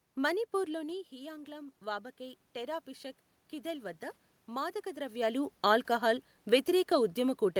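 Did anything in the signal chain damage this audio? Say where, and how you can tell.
Yes. In the call-processing stage, the automatic gain control raised its gain after the speech level at the microphone fell by about 11 dB, apparently as the talker moved back around half a second in. From 0.65 s to 2.94 s the gain climbs steadily by about 4 dB. The speech and the room noise swell together over that stretch, which points to a gain stage rather than the talker. The rise has settled by "కీథెల్వద్ద మాదక ద్రవ్యాలు ఆల్కహాల్".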